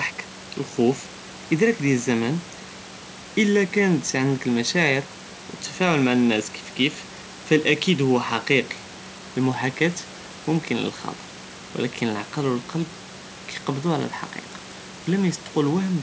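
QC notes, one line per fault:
Nothing to flag here; I couldn't hear any faults anywhere in the speech.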